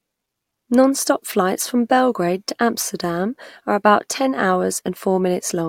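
No technical faults occur at any point in the recording, so there is nothing to describe in time order.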